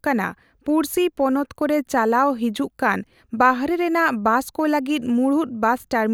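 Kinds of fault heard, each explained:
Nothing here calls for a fault label, as the speech comes across without any technical problem worth pointing out.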